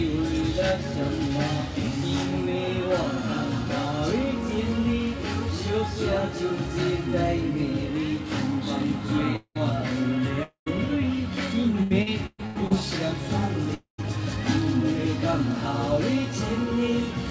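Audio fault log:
9.36–9.58 s, long network dropout: about 0.2 s never arrives; the last sound smears into a fading buzz, then about 80 ms of silence, likely a lost stretch of packets.
10.43–10.69 s, long network dropout: about 0.24 s is missing, filled by a decaying continuation that gives way to about 0.13 s of silence before the audio resumes further on.
11.83–12.73 s, repeated packet loss (robotic sound): five short holes, the longest about 0.12 s, are patched in quick succession, covering about 39% of the span. The result is choppy sound with pieces missing rather than one fade into silence.
13.74–14.01 s, long network dropout: one continuous gap of about 0.24 s; the fill fades out, leaving about 0.13 s of silence. Unlike the chopping at 11.83 s, nothing resumes between.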